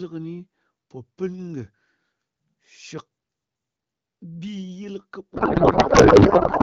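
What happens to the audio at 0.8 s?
Nothing goes wrong at 0.8 s: the speech there passes cleanly through the AMR wideband (HD Voice) codec, with no dropout, click or other fault at that moment.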